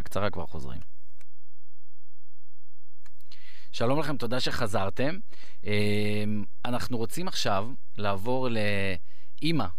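A speech recording with a DC offset running the whole way through, sitting at about -22 dBFS. The entire waveform is shifted away from zero by that constant, so you won't hear it, but it eats headroom and shows up as a steady lump at the very bottom of the spectrum.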